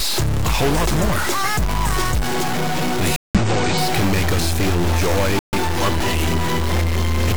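A data line or converter bit that is likely stuck at a fixed value runs under the whole clip. Roughly half of all sample values come out shifted by that bit's weight, so the error follows the waveform and gives distortion over everything. Because small values near zero flip the bit's state as they change sign, the quiet stretches also fill with a steady noise bed instead of going clean.

At 1.43 s a corrupt frame is decoded. Flipped bits in one compressed frame get past the decoder, which applies wrong gains or misreads codes and puts energy at frequencies where it does not belong. The damage lasts about one frame, around 20 ms, and peaks somewhere near -10 dBFS. It is heard as a short glitch that does not belong to the surrounding sound.

From 3.16 s to 3.40 s the decoder rejects corrupt frames and the player mutes them. The damaged data is refused and silence is put in its place, leaving a 0.24 s hole that starts abruptly. 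That length points to four consecutive frames being dropped. The same happens from 5.39 s to 5.58 s, with a 0.19 s gap that fits three frames. Timing carries on unchanged after each gap, so the sound resumes at its proper place rather than jumping back.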